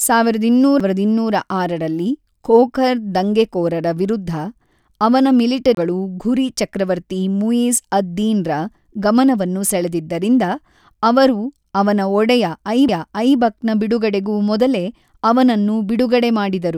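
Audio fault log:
0.80 s, 5.75 to 5.77 s, 12.88 s: CD skip, three times. Each is a brief mute, a few milliseconds at 0.80 s and 12.88 s and roughly 30 ms at 5.75 s, heard as a tick followed by an abrupt discontinuity in the speech. A disturbance or disc flaw throws the laser off its track onto a neighbouring turn of the spiral, so the player silences output briefly and resumes reading from a different point in the recording.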